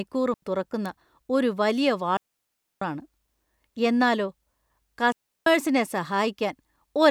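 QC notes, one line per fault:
0.34–0.42 s: digital wireless dropout, an 84 ms clean hole of near silence just before "തുറക്കുന്ന ഒരു വലിയ", the receiver muting on lost data, with no noise burst either side.
0.86 s: bit error spike, a single-sample tick at about -16 dBFS before "ഒരു വലിയ", one flipped bit jumping the value and returning, unlike a dropout's gap.
2.17–2.82 s: digital wireless dropout, a 644 ms mute right after "തുറക്കുന്ന ഒരു വലിയ", the link dropping too much data so the receiver fades out cleanly rather than crackling.
5.12–5.47 s: digital wireless dropout, a 343 ms silent hole from receiver muting, abrupt but fade-edged, with no hiss or burst marking its start or end.
6.21 s: bit error spike, a single-sample tick at about -34 dBFS, broadband and unrelated to the speech, a momentary jump instead of a sustained loss.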